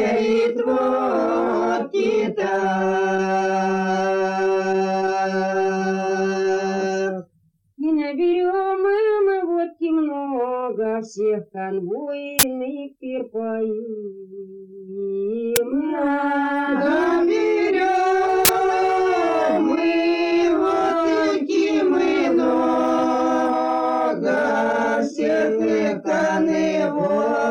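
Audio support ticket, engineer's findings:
Uninitialised buffer, three hits. Short, loud cracks or bursts of digital noise at 12.39–12.43 s, 15.56 s and 18.45–18.49 s. Burst lengths are 40 ms, 10 ms and 40 ms, each one whole block. Probable component: the playback buffer handoff. Mechanism: the output block was read before any audio was written into it, so stale memory contents played as samples.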